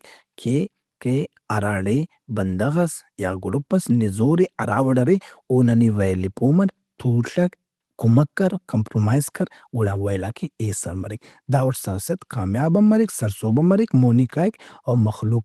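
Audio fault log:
The speech has passed through a call path whose codec limits the audio band to about 12 kHz, consistent with Opus at around 24 kbps, and no faults are present.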